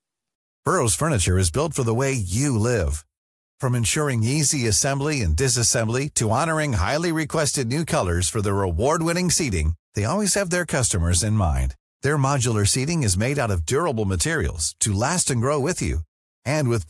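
No technical faults are audible.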